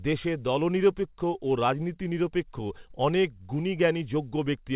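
No technical fault is audible in the speech, which has come through a call path whose band stops at 4 kHz, as expected of a narrowband telephone codec such as G.711 mu-law at 64 kbps.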